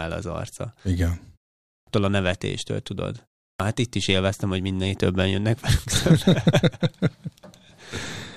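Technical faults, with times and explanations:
1.76 s and 3.49 s, clipped start after a pause: after silences of 0.47 s and 0.3 s, the output device had gone to sleep and needed about 0.11 s to wake, so each phrase bursts abruptly out of silence with its first sounds swallowed.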